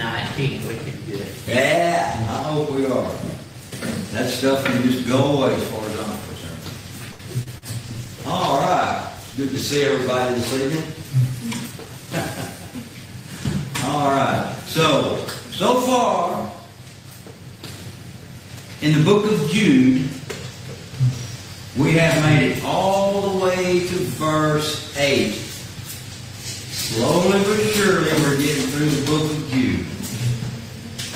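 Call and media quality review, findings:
Short stall from a late packet, 7.11 to 7.22 s. Sound held too long, with a faint buzz, and nothing lost. The jitter buffer ran dry waiting on a late packet, and the receiver stretched the last sound for 79 ms. Playout delay grew by 79 ms.

Short concealed packet loss, 7.43 to 7.49 s. Brief smear. 40 ms of audio never reached the decoder in time. The receiver bridged the gap with 25 ms of extrapolated sound, continuing the previous pitch or noise, then crossfaded back into the real signal.

Short concealed packet loss, 7.58 to 7.65 s. Second smear right after the first. Another 40 ms missing, covered by 37 ms of concealment, so the timeline stretches by roughly 10 ms. Same decoder-side fill-in as before.

Call bitrate drop, 7.86 to 11.40 s. Sound turns rough and watery. The bandwidth estimate fell and the Opus encoder went from 40 to 16 kbps, holding the lowest rate for about 2.2 s. 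The coarser coding degrades detail until the rate recovers.

Jitter buffer speed-up, 11.71 to 12.08 s. Audio hurried, pitch unchanged, at 113% speed. After the earlier delay build-up the buffer held surplus audio. The receiver trimmed short pitch-period pieces repeatedly, removing about 50 ms to cut latency.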